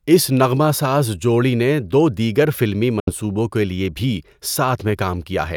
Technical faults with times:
3.00-3.11 Bluetooth dropout

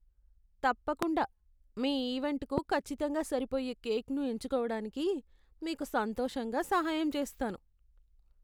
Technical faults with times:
1.02-1.05 loud pop
2.58-2.60 loud pop

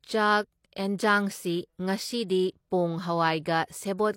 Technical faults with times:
2.28 pre-echo

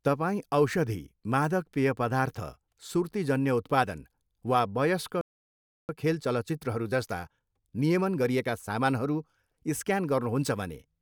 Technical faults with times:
5.21-5.89 playback stall
5.89-8.89 time-compressed catch-up

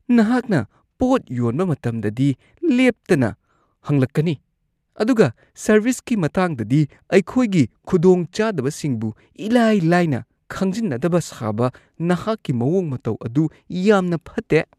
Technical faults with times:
4.06 DAB burbling

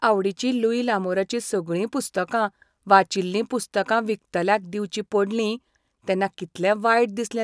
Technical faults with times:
none

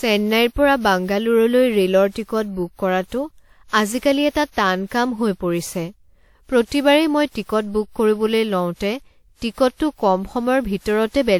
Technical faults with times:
0.00-11.40 generation loss

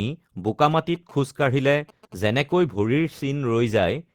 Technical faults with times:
0.47-2.60 GSM signalling bursts

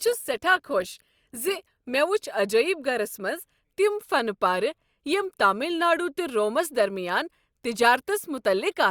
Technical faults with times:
0.00-2.00 adaptive stream starting at a low bitrate

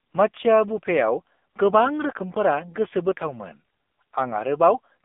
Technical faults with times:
0.00-5.05 AMR narrowband mobile codec

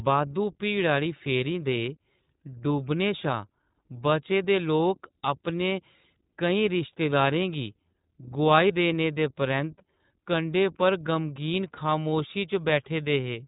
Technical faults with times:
0.00-13.47 iLBC codec
8.68-8.71 lost iLBC frames

